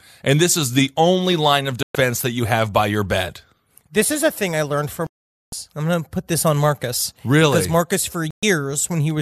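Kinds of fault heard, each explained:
Digital broadcast dropout: at 1.83–1.95 s, 5.07–5.53 s and 8.31–8.43 s the speech cuts to silence. The receiver lost the signal or rejected corrupted frames, then muted until clean frames returned. The outer gaps last about 120 ms and the middle one about 460 ms.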